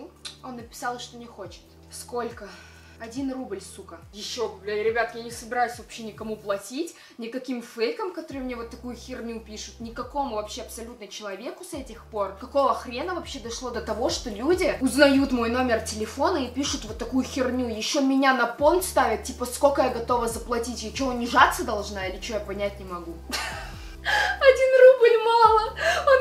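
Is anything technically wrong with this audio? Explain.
Yes. A sudden gain jump occurs at 13.74 s and lasts to the end: the level steps up by about 6 dB with no ramp, likely from a gain setting applied from one sample to the next, so the sound and its background noise rise together.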